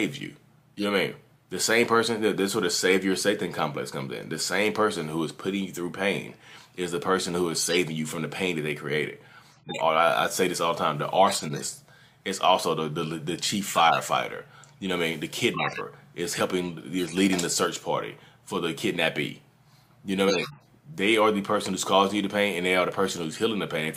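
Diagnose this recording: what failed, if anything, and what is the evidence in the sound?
The codec stage delivered corrupt frames to the decoder, which played them anyway (corrupt frame decoded). Chirps and noise bursts occur at 0.77–0.84, 7.60–7.76, 9.51–9.81, 11.28–11.65, 13.73–13.99, 16.99–17.17 and 20.28–20.67 s. Each spans one to several frames, with flipped bits misplacing spectral energy.

Storage or decoding also dropped compressed frames entirely (compressed frames skipped). Around 15.54–15.81 s the audio jumps forward by roughly 50 ms, a whole-frame multiple.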